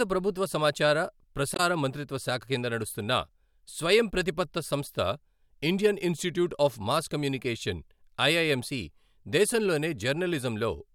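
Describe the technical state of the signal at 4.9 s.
At 4.9 s the signal is intact, with no audible fault at that point in the speech.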